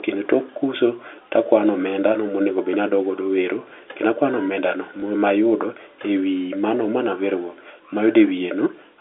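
Speech over what sounds like a narrowband telephone line, with one hiccup at 5.0 s: packet loss with the last packet repeated. A 20 ms chunk goes missing and the receiver replays the previous one, so you get a small blip, which fits a single lost packet.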